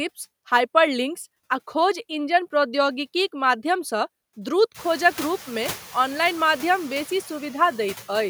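Throughout the clip, a noise suppressor is working frame by frame, pulling down each frequency band it judges to be steady background by about 11 dB. Its noise suppressor artifacts come from that gating: the background drops away in the gaps between phrases and surges back up beneath the speech. From around four and a half seconds, the room noise rises by about 24 dB and settles about 20 dB below the speech.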